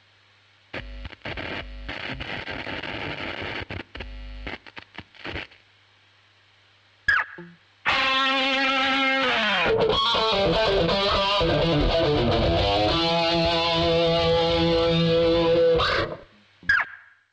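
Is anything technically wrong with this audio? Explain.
Yes. At 10.86 to 10.89 s there is a short concealed packet loss. About 20 ms of the stream arrived too late for the decoder, and the receiver extrapolated roughly 14 ms from the preceding sound, shaped from its pitch or as noise, before crossfading back into real audio. It is heard as a brief smear or wobble, and any very short transient there may be lost. The band stops at 8 kHz, which fits a G.722 call path.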